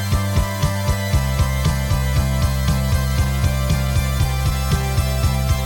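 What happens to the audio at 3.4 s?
Nothing goes wrong at 3.4 s; the audio runs on intact through that moment with no dropout, click or other fault.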